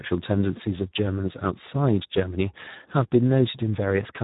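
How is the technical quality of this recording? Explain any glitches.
The technical quality is poor, with heavy Speex codec damage across the whole speech recording from start to finish.

Speex codec compression was applied at a low setting that gives the excitation signal very few bits, so the encoder can only roughly model each stretch of speech. The result sounds hoarse and noisy, a degree of damage that fits a rate around 8 kbps. Nothing is present above 3.8 kHz, which leaves the speech dull and muffled.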